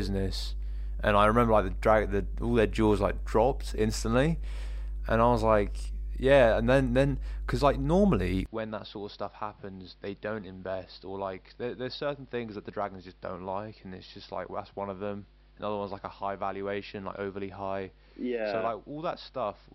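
A steady low drone runs under the speech from start to finish, a constant tone at 50 Hz with some low harmonics, sitting only about 10 dB below the talker, which makes it very prominent. This is mains hum: the power line is leaking into the signal path, most plausibly through a ground loop or a nearby transformer, so the 50 Hz supply frequency gets added directly to the audio.

At 8.46 s, right after "then because like normally", the speech abruptly turns dull and narrow, with nothing above 5.6 kHz, and drops by roughly 10 dB. There is no gap at the change. A new background noise floor, about 35 dB below the speech, continues to the end. This is likely an input switched to a poorer device: the recording moved to a more limited microphone or a headset's call mode, which passes a narrower band, runs at a lower level and has its own noise.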